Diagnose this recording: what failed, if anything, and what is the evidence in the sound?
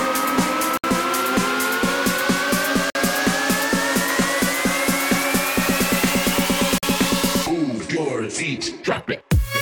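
Codec stage, a gap at a join of encoded pieces: silences of 64, 51 and 47 ms at 0.77, 2.90 and 6.78 s. Each piece's untrimmed encoder delay and end padding remain.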